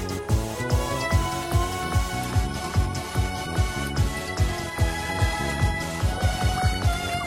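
At 2.17 s the sound switches abruptly, with no gap, to an adaptive stream at a lower bitrate and stays there to the end. Treble above 14.9 kHz vanishes and codec artefacts thicken, which fits a fall to roughly 24 kbit/s HE-AAC. Unlike a dropout, nothing goes silent.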